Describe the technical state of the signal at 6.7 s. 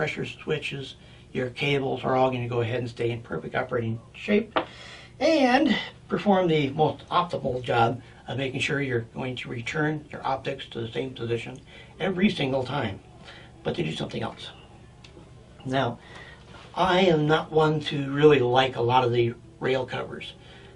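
At 6.7 s the signal is intact, with no dropout, click, distortion or other technical fault audible at that moment.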